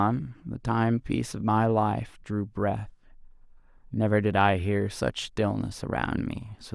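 No audible technical faults.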